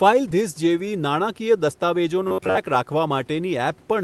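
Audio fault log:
2.28–2.58 s, robotic sound from repeated short buffers: rigid metallic buzz at 93.8 Hz, likely a 10.7 ms block looped through most of the span while real audio is skipped.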